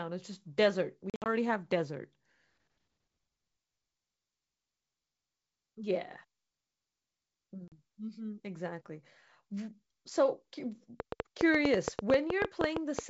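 From 1.10 to 1.29 s, packet loss on an ADPCM call blanks about 120 ms in gaps up to 60 ms long. The waveform shows flat, hard-edged holes. At 7.68 to 7.73 s, a 40 ms hole follows the same pattern. After each gap, the decoder's predictor and step size no longer match the sender's, so the speech returns briefly distorted.

From 11.0 to 13.0 s, a train of clicks ticks unevenly at about 8.6 per second, about 20 pulses reaching roughly 15 dB above the speech. They are likely interference or a faulty connection or power supply. On a spectrogram they appear as thin full-height vertical lines.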